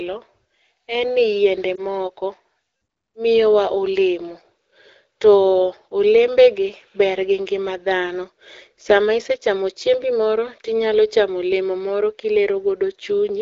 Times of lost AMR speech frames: 1.76-1.82

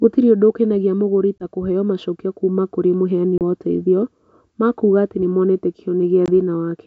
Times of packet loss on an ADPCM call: 1.39-1.43, 3.38-3.41, 6.26-6.29

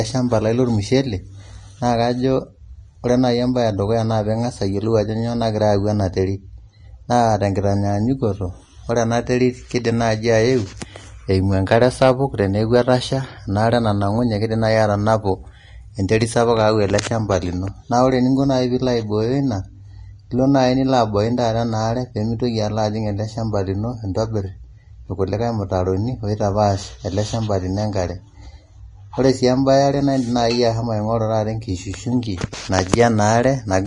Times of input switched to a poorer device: none

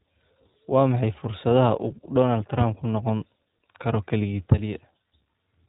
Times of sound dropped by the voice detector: none

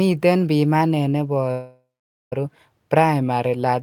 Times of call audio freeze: 1.51-2.33

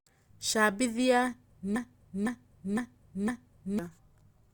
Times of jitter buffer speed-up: none

